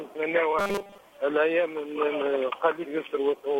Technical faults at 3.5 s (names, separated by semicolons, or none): none